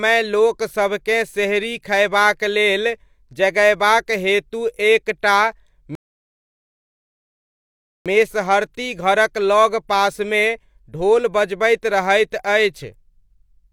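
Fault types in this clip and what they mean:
Rebuffering stall: the playback ran short of downloaded audio and simply paused until more arrived. In this speech, right after "एक टा", the sound falls to silence from 5.95 to 8.06 s, then picks up at "मेसहरती घरक" with nothing missing, adding about 2.1 s to the running time. Unlike a dropout, where a stretch of audio vanishes and the sound jumps ahead, the stall loses nothing and continues exactly where it stopped.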